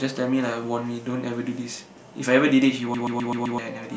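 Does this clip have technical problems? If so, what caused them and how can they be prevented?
Yes. From 2.94 to 3.58 s the speech locks into a system hang loop: the computer or its audio driver stalled while the sound hardware kept replaying its ring buffer, so one 128 ms slice repeats five times in a machine-gun stutter at about 7.8 per second, which fits a 2048-sample buffer. About 0.7 s of real audio is lost. Unlike a network dropout or a skipping stream, which leave silence or jump between different fragments, every repeat here is identical, and the loop rate stays perfectly steady. To prevent it, run audio at real-time priority on a dedicated thread, keep drivers updated, and have the driver mute the output if the buffer isn't refilled in time.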